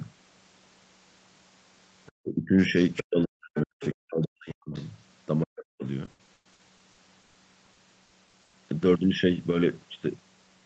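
Speech over a call link, and it has three distinct problems. Scraps of the other side's voice leaking through appear at 2.06–2.12, 2.97–3.01, 3.55–3.61, 3.81–3.94 and 4.76–4.85 s, likely loudspeaker echo the canceller missed, sitting roughly 10 to 30 dB under the talker. Speech suppressed in double talk makes the talker dip hard, up to about 40 dB, at 2.21–2.76, 3.01–4.74 and 5.43–5.84 s, likely the canceller ducking everything while both sides spoke. Then from 6.05 to 8.55 s it turns choppy and robotic, with repeated packet loss, likely from a string of lost or late packets, where the gaps run up to 120 ms and about a third of that stretch is patched over. Throughout, the audio tops out around 8 kHz, which fits a wideband call codec.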